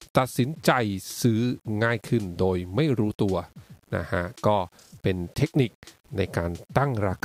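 From start to finish the speech carries a grainy, signal-following grit, most obvious as quiet tails sputter or drop out. That points to low bit depth without dither, likely rounding to something like 9 bits, leaving distortion roughly 35 dB below the voice.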